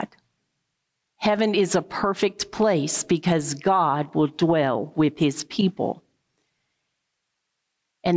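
Throughout the speech there is gain pumping. The gain ducks under each loud sound, a swing of roughly 10 dB. The likely cause is input gain set far too high, with a fast limiter or compressor clamping every peak and squashing loud and soft parts together. The call's microphone processing limits the band to nothing above 8 kHz.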